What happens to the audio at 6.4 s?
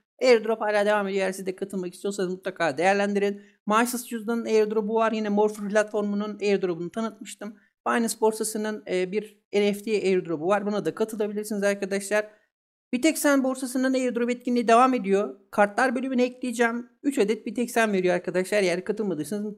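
Nothing goes wrong at 6.4 s; the audio plays through that moment intact, with no dropout, click or other fault.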